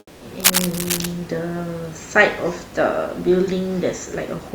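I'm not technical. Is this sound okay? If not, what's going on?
No, not quite. Two things stand out.

At the very start, from 0 to 0.21 s, you're hearing comfort noise in place of the background. Instead of the real room sound there's a flat, featureless hiss, a bit quieter than what follows. The likely cause is the sending end pausing transmission while nobody talks, with the receiving end filling the gap with made-up noise.

Then, from 0.40 to 1.12 s, there's cable scratch noise: a rough, scratchy rustle riding over the speech, roughly as loud as the speech itself. That's likely a worn cable or plug being moved, so the electrical contact keeps flickering. The faint room noise underneath is just the room, not a fault.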